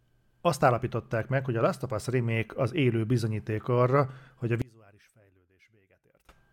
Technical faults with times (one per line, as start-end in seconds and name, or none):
4.62-6.29 one channel inverted